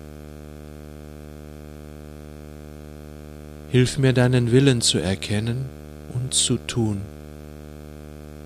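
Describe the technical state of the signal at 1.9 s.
At 1.9 s the signal carries video or display buzz, present across the whole clip: a screen or video cable couples its 75 Hz field rate into the audio, some 20 dB under the signal, giving a rasping buzz with hash above. Unlike mains hum, 75 Hz matches no 50 or 60 Hz harmonic.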